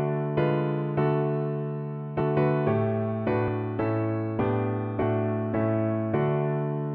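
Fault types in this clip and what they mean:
Compressed frames skipped: whole compressed frames, missing from the file or rejected as damaged, are never decoded, so the audio leaps ahead by roughly 100, 70 and 50 ms, steps matching 26 ms frames.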